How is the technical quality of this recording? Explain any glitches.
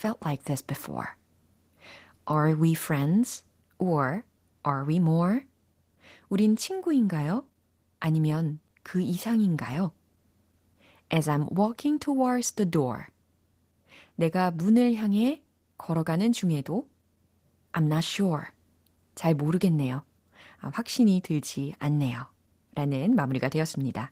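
The recording is compromised throughout by Opus voice compression, with damage plainly audible from start to finish. The speech has the slightly hoarse, robotic texture of a voice coder driven hard, which fits a low bitrate around 16 kbps in hybrid mode: a linear-prediction layer models the lower band from a coarsely coded excitation, while a transform layer thinly sketches the content above 8 kHz. Unlike a simple low-pass filter, the top end is present but grainy rather than missing. Unlike MP3-style swirl, the roughness sits in the voice's buzz itself.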